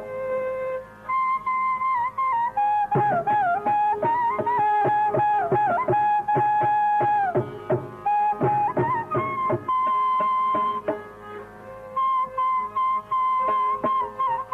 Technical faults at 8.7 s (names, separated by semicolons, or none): none